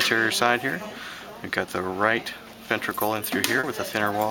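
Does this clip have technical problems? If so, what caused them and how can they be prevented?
Yes. Around 3.59 to 3.66 s there is short concealed packet loss: about 40 ms of audio arrived too late for the decoder, so the receiver extended the preceding sound to fill the gap before blending back in, leaving a brief smear or wobble there. Giving the receiver a larger jitter buffer or adding forward error correction on the network link would help the audio arrive intact.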